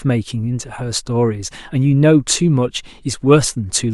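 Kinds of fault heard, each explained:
Nothing stood out on listening to the speech.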